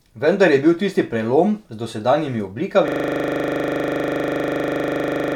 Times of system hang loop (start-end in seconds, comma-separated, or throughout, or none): 2.88-5.36